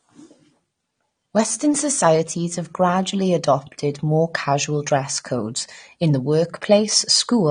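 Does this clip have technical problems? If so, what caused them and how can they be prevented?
Yes. Throughout the clip, the speech was likely encoded with AAC compression at a bitrate that fits around 32 kbps. The encoder discarded everything above 9.7 kHz and coarsely quantised what remained, leaving plainly audible dullness, smeared sibilants and a warbling, fizzy texture. Encoding at a higher bitrate, such as 128 kbps, or delivering an uncompressed master would prevent it.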